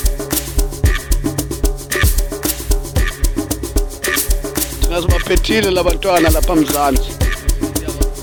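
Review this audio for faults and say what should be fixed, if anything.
Nothing in this audio needs to be fixed, as no faults can be heard.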